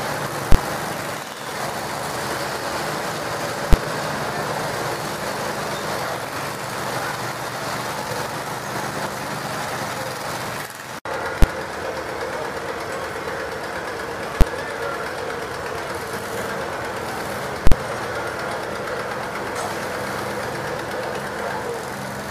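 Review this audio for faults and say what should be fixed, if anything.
Invalid numbers at full scale occur five times: 0.52 to 0.55 s, 3.73 s, 11.42 s, 14.41 s and 17.67 to 17.72 s. A calculation produced infinite or invalid values, and the output was pinned at one extreme value for a whole processing block. The three 12 ms events are single bangs, which fits a 512-sample buffer. The 23 ms and 46 ms events, which fit 1024- and 2048-sample buffers, give a loud pop at each edge with nothing between. Ordinary clipping would flatten the peaks of audible sound, while here the sound vanishes inside a solid block held at one extreme value. A dropout would leave a quiet gap with no pops at its edges.

To prevent it, test each block for non-finite samples and replace them with silence, and guard the calculation that produces them against invalid inputs.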